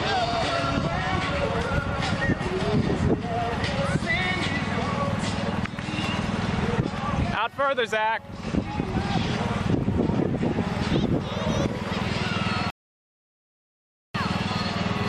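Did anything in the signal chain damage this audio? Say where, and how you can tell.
Yes, there's a rebuffering stall at the playback end. At 12.70 s the sound drops to dead silence, then picks up at 14.14 s exactly where it left off. Nothing's skipped or repeated, it's just pushed later, so about 1.44 s gets tacked onto the running time. That's the player draining its download buffer, pausing until enough data arrives, then carrying on. It's a delivery hiccup rather than damage to the content.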